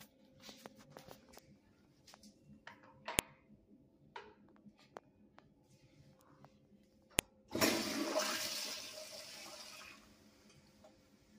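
At 3.19 and 7.19 s, four seconds apart, file header played as audio: stray header bytes snap loudly, showing as a vertical full-band spectrogram streak and a waveform spike.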